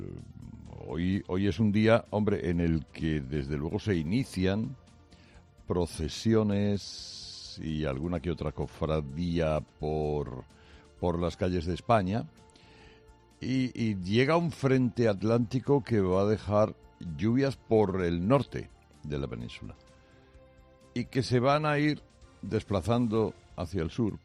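No technical faults can be heard anywhere in the audio, and the signal stays steady and intact throughout.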